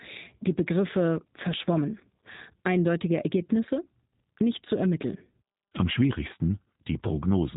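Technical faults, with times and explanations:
Throughout, G.729 codec: nothing above 4 kHz, and speech is rebuilt at 8 kbit/s from a filter, pitch predictor and sparse pulses, so it sounds rough and synthetic rather than merely muffled.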